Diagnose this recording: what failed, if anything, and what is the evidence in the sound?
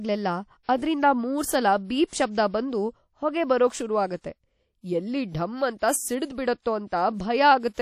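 The speech has a ringing, washy quality, with a hiss that rises and falls with the signal and nothing above 15.3 kHz. This is likely WMA compression at the codec stage. The plainly audible damage fits a low bitrate around 48 kbps, where the quantiser drops weak spectral lines.

Pre-echo appears as a brief hiss just before sharp attacks at 0.63, 2.07 and 6.87 s, smeared over about 56 ms each time. The codec spreads its coarse quantisation noise across the whole transform block, filling the quiet instant ahead of the onset.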